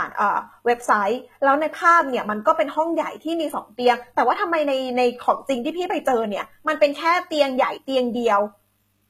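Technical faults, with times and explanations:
Throughout, HE-AAC compression: the treble is bright but synthetic, s sounds come out gritty and lispy, and nothing reaches above 14.9 kHz. That's likely spectral band replication copying lower bands upward, and the obvious damage fits roughly 20 kbps.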